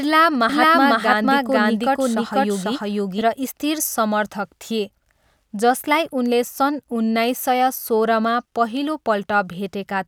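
A doubled audio track runs from 0.49 s to 3.21 s: the speech is heard twice, a second full-band copy trailing the first by about half a second at roughly the same loudness. The copy is dry, with no decay or room colour, and it cuts in and drops out abruptly at those edges. The likely cause is the signal being captured again through a slower path, so two identical streams end up mixed out of step.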